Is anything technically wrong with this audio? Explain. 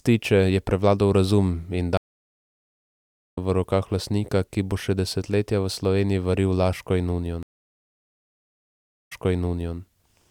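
Yes. A stream reconnect occurs twice: at 1.97 to 3.38 s the speech drops out for about 1.4 s and resumes roughly a second further on, skipping material; at 7.43 to 9.78 s a 1.7 s silence ends with playback jumping 0.68 s back, repeating material. Each time the connection broke, the player restarted its decoder mid-stream, and playback resumed from a different point.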